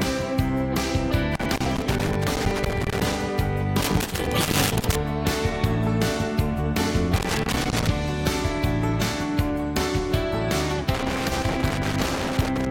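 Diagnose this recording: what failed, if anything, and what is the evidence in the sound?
Loose connector crackle in the analogue wiring: irregular bursts of crackle and scratching from 1.35 to 3.15 s, 3.81 to 4.95 s, 7.16 to 7.87 s, and 10.95 to 12.66 s. A worn or dirty contact intermittently opens and closes, chopping the signal, and any DC on the line adds pops.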